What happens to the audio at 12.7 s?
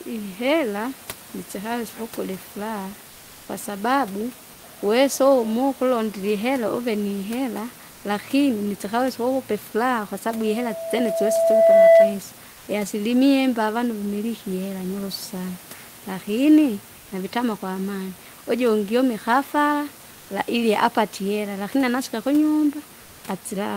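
From 12.51 to 12.67 s, just before "iasilimia imba avanu", the room noise turns into a smooth, featureless hiss for about 160 ms and drops about 1 dB, sitting roughly 26 dB under the loudest passages. This is comfort noise in place of the background, likely from discontinuous transmission: the sender stops sending during the pause, and the receiver fills the gap with synthetic noise that only roughly matches the real room sound.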